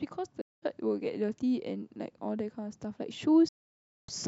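Speech, with two soft-edged holes from AAC frame loss with muting. The first runs from 0.41 to 0.63 s. The second runs from 3.49 to 4.09 s. Missing frames were decoded as silence. Overlapping windows fade the sound out and back in.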